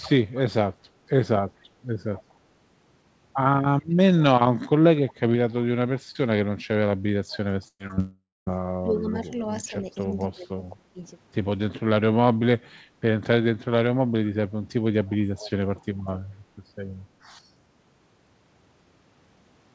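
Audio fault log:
0.00–0.39, 2.16–2.34, 3.91–4.23, 5.08–5.13, 7.30–7.38, 15.07–15.51 s: echo leak. A faint delayed copy of the speech trails the original by 239 ms, at about 20 to 25 dB below it. The pieces are brief and fragmentary, dropping in and out rather than forming a continuous second voice. The likely cause is a far end on loudspeaker whose echo canceller let part of its microphone pickup through and returned it. That is why the copy is quiet and consistently delayed by the round trip.
7.68–7.81 s: burst of packet loss. About 120 ms of speech is missing. The receiver holds the last sound for roughly 115 ms as a buzz or hiss that fades, with about 50 ms of near-silence before the speech resumes further on. This is what extrapolating from the last good frame sounds like when several consecutive packets fail to arrive.
7.87–7.91 and 7.95–7.99 s: short concealed packet loss. Two 20 ms holes follow the burst closely. 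Each is patched by continuing the preceding sound and blending back, so they come across as small smears or wobbles rather than gaps.
7.99–8.48 s: long network dropout. Almost half a second, about 480 ms, never arrives, likely because the connection stalled. Concealment stretches the last sound for roughly 470 ms as it fades away. The final 230 ms or so is effectively silent before the speech comes back without the lost portion.
8.82–11.02 s: speech suppressed in double talk. Over about 1.5 s of this span, the talker's level dips in pieces, at its deepest by around 30 dB, while the other side is also talking. This is likely the echo canceller failing to separate the local talker from loudspeaker echo and attenuating both together, which produces the pumping, partly cut-out effect.
The audio has nothing above 8 kHz throughout, which fits a wideband call codec such as G.722 at 64 kbps.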